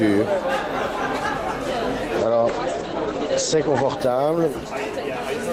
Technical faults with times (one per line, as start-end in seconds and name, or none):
2.22-5.52 call bitrate drop